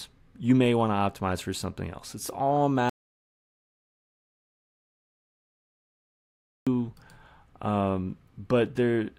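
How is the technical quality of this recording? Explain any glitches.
The recording has one serious glitch, a long gap where the speech vanishes completely.

Audio dropout to silence, from 2.89 s to 6.67 s: for about 3.77 s the signal falls to silence, with no room tone or background left. The speech cuts off abruptly mid-flow and resumes just as abruptly. The cause is likely a lost input, such as a disconnected device, a failed link or an accidental mute, while recording continued writing silence. Whatever was said in that stretch is gone.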